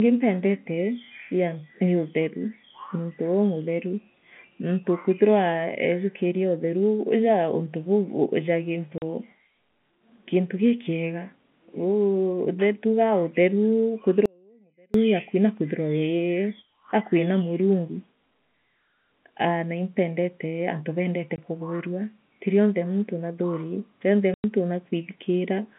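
Packet loss filled with silence strikes first: at 8.98 to 9.02 s, lost packets were replaced by 40 ms of dead silence, leaving a hard-edged hole in the speech. From 14.26 to 14.94 s comes an audio dropout to a faint residue, likely a break in the signal feed while the rest of the path stayed live. For about 0.69 s the speech vanishes abruptly, and only a faint trace remains, far below its normal level. Packet loss returns at 21.36 to 21.38 s with a single 20 ms silent gap, and again at 24.34 to 24.44 s with a 100 ms gap. The gap lengths are consistent with 20 ms packets. Both gaps have the same hard edges, heard through the narrow band of the G.711 telephone coding.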